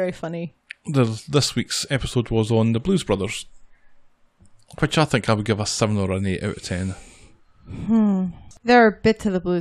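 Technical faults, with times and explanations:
No technical faults are audible anywhere in this speech recording.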